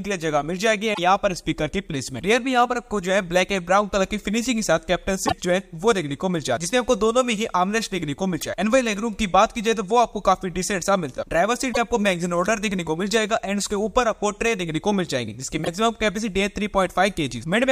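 Damaged data in a compressed stream breaks the audio five times, at 0.90–0.99 s, 5.24–5.32 s, 8.37–8.43 s, 11.69–11.78 s and 15.61–15.68 s, each a brief chirp or blip lasting roughly 50 to 85 ms. At each point corrupted bytes reach the decoder, which misreads those frames, loses its lock on the stream and hunts for the next valid frame header before clean sound resumes.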